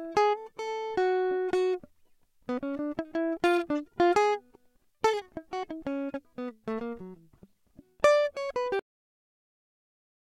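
A music clip with a cut-off end: at 8.79 s the sound stops mid-note and falls straight to digital silence. The final buffers were never written or played back. On a waveform the trace drops abruptly to a flat line, and a spectrogram shows every band ending on one vertical edge with no decay tail.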